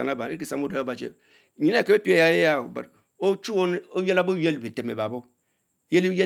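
Nothing in the recording stood out as a technical fault on listening.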